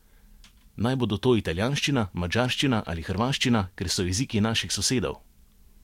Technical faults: none

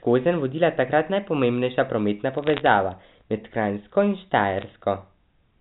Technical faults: bit errors on a digital phone line

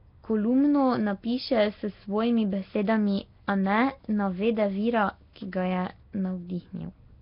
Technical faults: Nellymoser compression

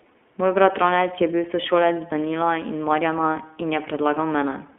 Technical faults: iLBC codec

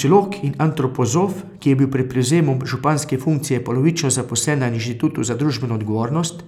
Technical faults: none

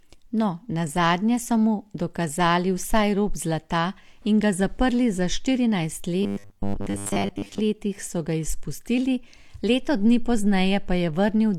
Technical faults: robotic sound from repeated short buffers

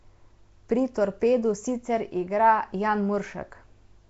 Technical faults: Nellymoser compression

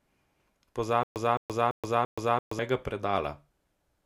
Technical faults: stutter with silent gaps

